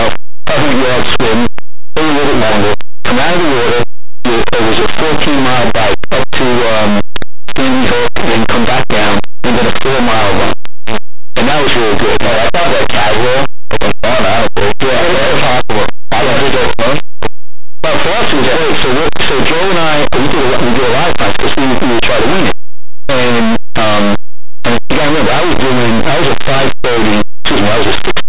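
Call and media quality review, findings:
Linear audio read as companded, entire clip. Speech heard as very loud, harsh distortion. Plain linear 8-bit samples decoded as mu-law codes: small values just one side of zero expand to maximum output, opposite side stays tiny. Likely a decoder format mismatch.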